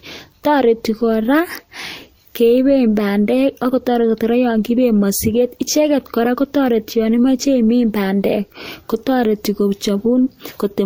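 Throughout, the speech carries two distinct layers of coding artefacts, unlike a single codec's, and nothing above 16.6 kHz, likely from transcoding between lossy codecs, MP3 then Vorbis.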